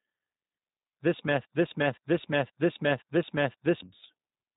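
From the first moment, the speech carries the sound of the G.729 codec. Everything above 3.8 kHz is gone, so consonants lose their edge and the tone is boxed in. The damage is plainly audible. Each short frame is rebuilt from a vocal tract filter, a pitch estimate and a few pulses, which leaves the voice rough and slightly synthetic. The character points to an 8 kbit/s G.729A link.

At 1.45 s a broken-record loop begins. A fragment about 0.52 s long repeats exactly, back to back, five times. It runs until 3.82 s. The repeats are identical, with no variation between passes. The likely cause is a player, encoder or stream that stalled and kept sending the last fragment it held. Whatever should have played across those seconds is lost.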